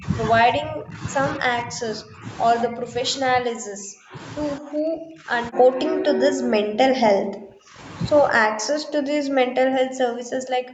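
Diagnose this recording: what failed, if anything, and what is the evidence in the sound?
The speech is repeatedly pulled down in the call processing stage, most likely speech suppressed in double talk by the echo canceller. The level dips at 0.0–0.06 s, 0.51–1.03 s, 1.38–2.25 s, 2.65–3.04 s, 3.21–4.17 s, 4.59–5.33 s, 5.5–7.81 s, and from 8.35 s to the end. The early dips are shallower, about 15 to 25 dB. From 3.21 s they reach about 40 dB. The canceller cannot tell this talker from loudspeaker echo, so it attenuates both.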